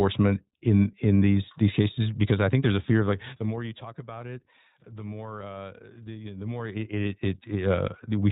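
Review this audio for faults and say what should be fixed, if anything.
The speech runs through the iLBC codec from start to finish, and the damage is plainly audible. The band stops at 4 kHz, so sibilants and breath lose their top. Each short frame is coded on its own, without help from the one before. That leaves a rough, slightly synthetic grain on every syllable. The texture points to 20 ms frames, which fits the 15.2 kbps mode. The fader moves stay smooth under this grain. To prevent it, record or transmit with a wideband codec at a higher bitrate, or keep a lossless copy.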